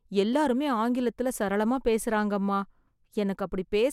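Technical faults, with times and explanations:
Nothing stood out as a technical fault on listening to this speech recording.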